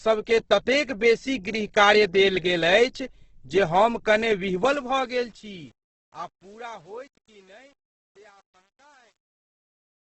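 From start to finish the speech sounds grainy and rough, with nothing above 8.1 kHz, so it comes across dull. This is likely Opus compression in its music mode, starved of bits, which fits a rate near 12 kbps. Bands get filled with noise instead of detail.

From 4.54 s, as the sound fades out toward 10.1 s, a gritty texture creeps in. From 5.61 s to the end it is at its worst. This is truncation distortion on a fade: the quiet tail collapses into coarse steps without dither, which points to roughly 9-bit resolution.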